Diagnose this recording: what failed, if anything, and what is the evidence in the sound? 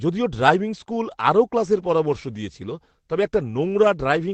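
Nothing failed here: the speech simply comes through an ordinary call path whose top end stops at about 8 kHz, which is what you'd expect from an Opus link at a modest bitrate, and there's nothing else in the sound that points to a problem.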